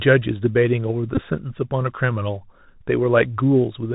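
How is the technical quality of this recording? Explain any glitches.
Quality is limited by a narrowband headset link throughout, plus one brief glitch. The speech passed through the Bluetooth CVSD headset codec, a one-bit up/down coder whose adaptive step can't keep pace with loud high sounds, which fits the 64 kHz narrowband mode. Nothing above 4 kHz survives, s sounds turn scratchy, and granular hiss sits underneath. From 1.15 to 1.21 s, a Bluetooth headset packet repeated: packets dropped, and the chip replayed stale data every 3.75 ms for about 19 ms, producing a short buzz near 267 Hz.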